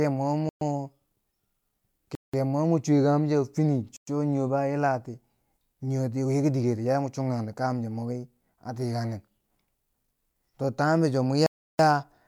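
Bluetooth stalls interrupt this speech clip four times: at 0.49 s for 0.12 s, at 2.15 s for 0.18 s, at 3.97 s for 0.11 s just before "cho nii", and at 11.46 s for 0.33 s. Each time the audio drops to dead silence, then resumes where it left off. The likely cause is radio interference delaying packets, so the headphones' buffer empties and playback pauses until the resent data arrives.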